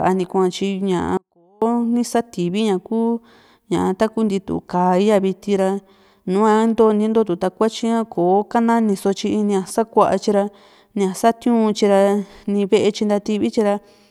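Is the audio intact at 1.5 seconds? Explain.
No. At 1.5 seconds the speech is inside an audio dropout to a faint residue. It runs from 1.17 to 1.62 s, about 0.44 s of lost signal. The speech cuts out abruptly rather than pausing or fading. The gap is not silent. A faint leak of sound remains, roughly 35 dB below normal level. That points to the wanted signal being likely interrupted upstream while the path after the break stayed live.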